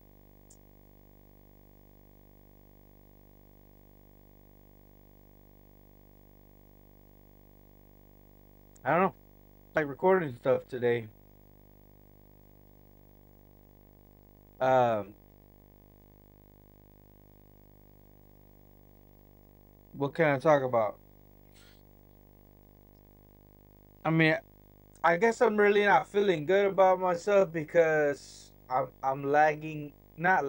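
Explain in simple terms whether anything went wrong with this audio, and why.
A low buzz runs under the whole recording, steady from start to finish. This is video or display buzz: a screen or video cable leaking into the audio. The buzz repeats 50 times a second, matching the picture's refresh rate, with a hiss above it and a very high whine at 15.6 kHz, the rate at which the picture is drawn line by line. That whine sets it apart from ordinary mains hum, which has no such tone.

At 9.77 s there is a brief chirp or blip. This is damaged data in a compressed stream: part of the stored file was corrupted, so the player misread that spot, lost its place and jumped ahead to the next readable chunk. Unlike a click from a scratch or a bad cable, it comes from the player losing its place in the file rather than from damage to the sound itself.

From 9.94 s to the end, everything moves noticeably slower, at about two-thirds of the earlier pace, yet the pitch doesn't drop. 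That is a time-stretched section, most likely from software lengthening the audio by repeating tiny slices. A tape or playback running slow would also lower the pitch. Here the pitch stays put, and that marks it as stretching.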